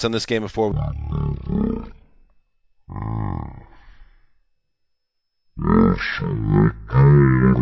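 Speech, with a wrong sample rate from 0.72 s after "on this game before" to the end: audio recorded at 44.1 kHz, played at 16 kHz, runs at 0.363× speed, about 17.6 semitones low.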